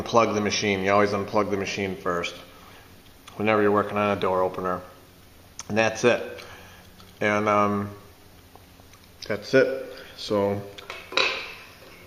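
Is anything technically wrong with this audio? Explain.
No, the signal shows no technical faults anywhere in the recording.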